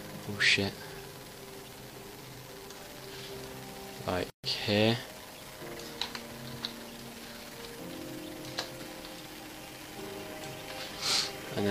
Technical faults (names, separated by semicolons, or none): gap at a join of encoded pieces